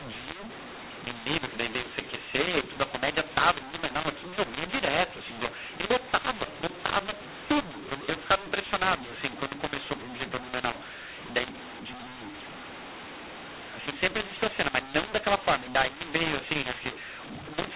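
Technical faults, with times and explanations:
Throughout: mu-law and A-law mixed up. The speech sounds harsh and gritty, with levels jumping unevenly so some parts blare while others shrink, and the gaps between phrases hiss with noise instead of falling silent. The telephone audio was written with the G.711 mu-law curve but decoded with the A-law curve, so each 8-bit code maps to the wrong amplitude, and the quietest samples land well above zero, filling pauses with noise.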